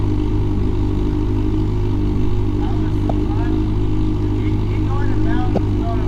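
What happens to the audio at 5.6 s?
Damaged data in the compressed stream corrupts the frames between 5.55 and 5.58 s. The decoder misreads them, loses sync and hunts for the next valid frame header. The result is a brief chirp or blip lasting about 30 ms.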